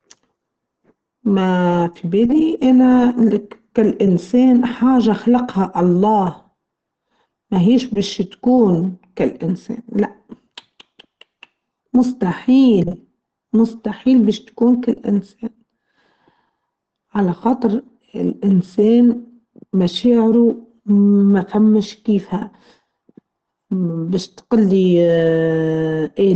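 It's a speech clip with Opus compression damage running the whole way through, and it's plainly audible: the sound is muffled and hoarse, with nothing above about 8.4 kHz. That's likely the encoder's speech (SILK) mode at a low bitrate, which fits something around 16 kbps.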